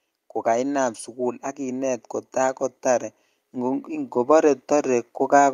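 From about 0.43 s right through to the end, you can hear automatic gain rising. The gain control has decided the incoming speech is too quiet and keeps nudging its gain upward, so the level creeps up gradually rather than jumping. Because it's the whole input being boosted, the voice and the background noise swell together. The room tone comes up right alongside the talker, which is the giveaway that it's gain and not someone leaning in.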